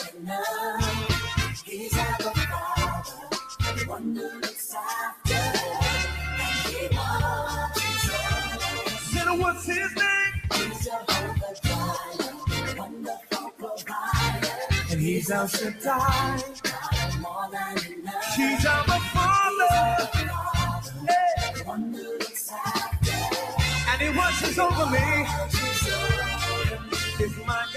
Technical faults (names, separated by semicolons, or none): noise suppressor applied to music or sounds; sound cut by the noise suppressor